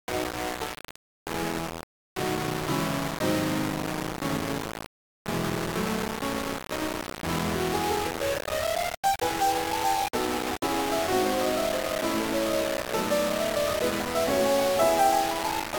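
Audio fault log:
throughout low bit depth without dither: the music has a harsh grain that follows its loudness, and quiet passages sputter or vanish, likely from rounding to 3 bits, leaving error nearly as loud as the music. Waveform shows coarse stair steps; spectrogram shows broadband hash tracking the sound.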